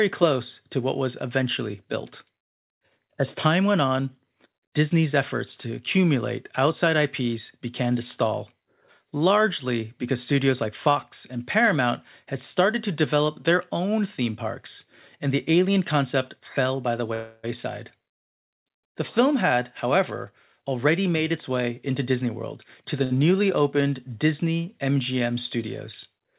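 Speech carried over a call path with nothing above 4 kHz, which fits G.711 mu-law at 64 kbps, shows four faults. A call audio freeze from 17.14 to 17.45 s, right after "concept fell by the", holds the last sound as a fading buzz for about 0.29 s. The likely cause is packets held up in transit, so the jitter buffer ran empty. The speech then resumes where it stopped, with nothing lost. A jitter buffer speed-up from 19.20 to 20.00 s plays the audio 7% fast at unchanged pitch. The buffer repeatedly trimmed pitch-period slices, some 70 ms in all, to shed excess delay. A second speed-up from 20.62 to 23.01 s, just before "newly opened", runs 6% fast and removes roughly 150 ms the same way, so the delivery sounds hurried. A short stall from a late packet at 23.04 to 23.12 s, also just before "newly opened", stretches one sound by 62 ms with a slight buzz until the overdue packet arrives.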